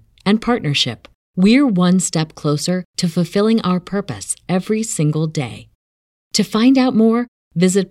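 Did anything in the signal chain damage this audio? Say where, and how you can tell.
No, no signal chain damage.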